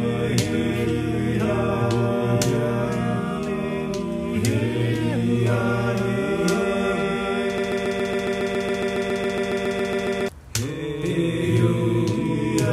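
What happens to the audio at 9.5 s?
At 9.5 s the audio is caught in a broken-record loop that runs from 7.58 s to 10.29 s. A fragment of about 0.14 s (138 ms) repeats exactly, back to back, about 20 times, giving a rapid mechanical stutter in place of the sound that should have continued. The likely cause is a stalled player, encoder or stream that kept resending the last chunk it held, so the intended audio for that span is lost. On a waveform the same short shape repeats like tiled copies. A spectrogram shows an identical block stamped every 0.14 s across the span.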